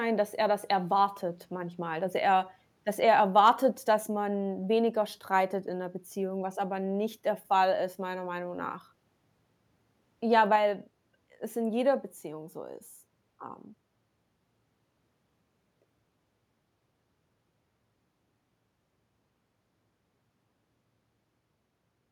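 Microphone overload, 3.38 to 3.49 s, just after "dass er dass er" and before "dass man weniger streitet": the peaks push about 2 dB past the converter's ceiling, likely from input volume set too high. Their flattened tops, under one percent of samples, give the loudest syllable a brief harsh crackle.

Microphone volume stepped down at 4.08 s, just before "man weniger streitet in", and again at 10.56 s: the speech and the background together drop abruptly by about 3 dB and then about 4 dB. This is likely call software cutting the input volume, the first time soon after the distorted peak.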